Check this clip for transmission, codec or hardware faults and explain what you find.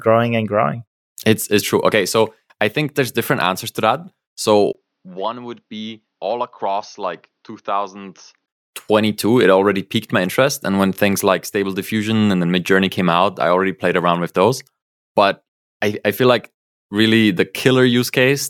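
One fault stands out: from 4.73 to 8.48 s, the speech turns dull and quieter, with nothing above 6.5 kHz, a brief gap at the switch, and a different, faint background noise. This is likely an input switched to a poorer device, not a codec bandwidth drop, because the level and noise floor change too.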